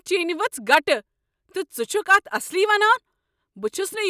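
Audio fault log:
No technical faults are present in this speech recording; the signal stays continuous and steady across the whole clip.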